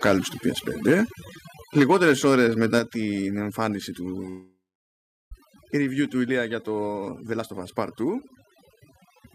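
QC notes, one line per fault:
throughout: overdone noise removal. Bands near the noise estimate are pushed far down, so the background drops and breaks up into twinkling specks.
0.04–0.13 s, 0.88–1.01 s, 1.77–2.79 s: microphone overload. Harsh crackle on loud peaks, about 6, 4 and 7 dB over the converter's limit, likely from input gain driving the converter into clipping a noticeable share of samples.
1.79 s, 2.79 s: microphone volume stepped down. Speech and background drop abruptly by about 2 dB and then about 6 dB, likely the call software cutting input gain during and right after the clipping.
4.29–5.33 s: long network dropout. The last sound continues as a fading buzz, then about 0.73 s of silence. Some 0.6 s of audio likely never arrived and never plays.
6.98–9.31 s: jitter buffer speed-up. Speech runs at 112% speed with unchanged pitch and sounds hurried, because repeated pitch-period slices totalling about 0.3 s are cut to shrink the buffer delay.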